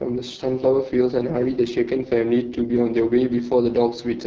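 From start to end, the speech carries heavy AMR wideband (HD Voice) codec damage. Nothing sounds above about 7.6 kHz. The vocal tract model is starved of bits, so speech turns rough and raspy. That fits the lowest 6.6 kbit/s mode.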